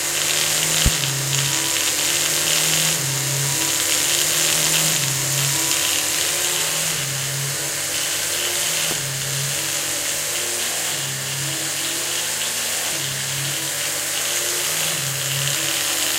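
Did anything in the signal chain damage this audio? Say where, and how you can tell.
Yes. There is a loud pop at 0.86–0.89 s and another at 8.91–8.94 s. Each is a single sharp thump, about 15 dB and about 10 dB above the sound, which continues underneath. This likely comes from a voltage step in the analogue wiring, such as a plug or switch.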